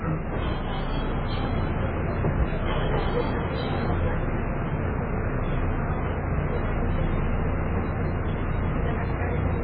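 Throughout, nothing sounds above 4.7 kHz, and the sound turns watery and swirly. This is likely heavy MP3 compression, fitting a bitrate near 16 kbps.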